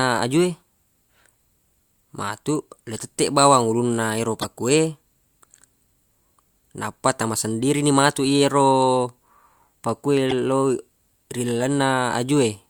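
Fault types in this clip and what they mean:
Damaged data in a compressed stream: a stretch of the encoded bitstream was corrupted, so the decoder misreads those frames, loses sync and hunts for the next valid frame header before the speech picks up again. Here it shows up twice as short digital glitches, a brief chirp, squawk, click or short hole cutting into the speech at about 4.41 to 4.45 s and again at about 10.29 to 10.33 s, each lasting only a few tens of milliseconds.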